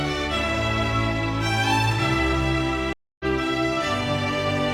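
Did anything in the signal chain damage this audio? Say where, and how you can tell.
Yes, there's a stream reconnect at the network stage. From 2.93 to 3.25 s the sound drops out for 267 ms and comes back roughly a third of a second further on, so the connection broke and a fresh decoder picked up the live stream mid-flow.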